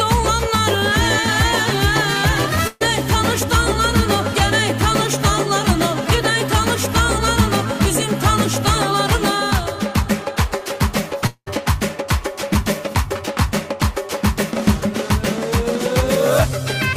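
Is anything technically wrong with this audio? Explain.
Yes, there are two network faults. From 2.67 to 2.82 s there's a burst of packet loss: the receiver stretches the last sound for 130 ms, fading it, then skips ahead past 140 ms of missing audio. Around 11.26 to 11.48 s a fading buzz or hiss holds about 0.2 s before 70 ms of silence, then the audio resumes further on, likely a long network dropout.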